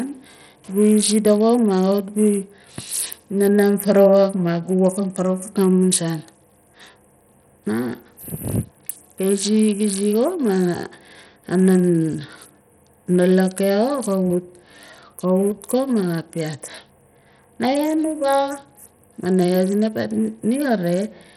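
Throughout, the speech sounds dull and gritty. The treble drops out or flickers in and out. A rough grain and aliasing ride on every sound. This is likely Bluetooth SBC compression, starving its top sub-bands of bits at roughly 64 kbps.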